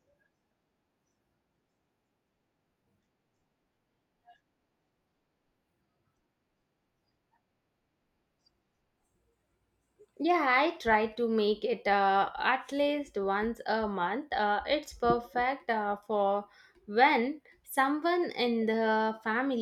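A speech recording with no technical fault to report. Nothing in its playback stands out as a problem to flag.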